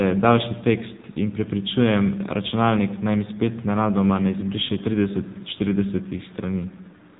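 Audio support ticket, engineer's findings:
AMR narrowband mobile codec, whole clip. Call path squeezed through AMR-NB at a low rate, consistent with 7.4 kbps. Speech rebuilt from a vocal-tract model plus a handful of pulses per subframe, so the voice comes out buzzy and synthetic, with plainly audible coding damage. Band-limited: nothing passes above 3.8 kHz, giving a muffled, phone-like top end.

Echo leak, 6.66 s to 7.19 s. Likely a far-end loudspeaker with incomplete echo cancellation, returning part of what its microphone captured. Heard as a delayed copy of the speech about 307 ms behind the original, very faint, well below the main voice, present only in this closing stretch.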